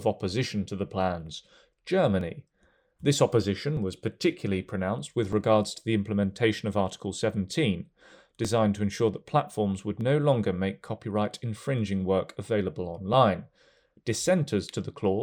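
From 0.65 s to 14.7 s, about ten clicks recur every 1.56 s during the speech, likely clock drift buffer slips: two clocks disagreeing by roughly 0.1 percent, dropping or repeating a small sample block. Their strict regularity sets them apart from random dropouts.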